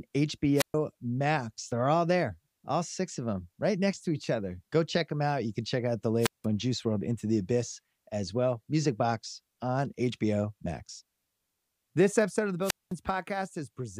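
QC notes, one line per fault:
0.55–0.75 s: wireless microphone squelch dropout. Hiss swells briefly, then the speech cuts to near silence for about 125 ms before returning. The radio link from the transmitter faded below the receiver's threshold. The squelch then muted the output rather than pass pure static.
6.20–6.46 s, after "can check out the": wireless microphone squelch dropout. Same pattern, with a mute of about 178 ms. The signal weakened, noise rose, and the receiver gated the audio shut until the carrier recovered.
12.61–12.94 s, after "episode of the": wireless microphone squelch dropout. The longest hole, about 211 ms of near silence. A brief rise of static precedes the cut, and the speech comes back once the signal returns above squelch.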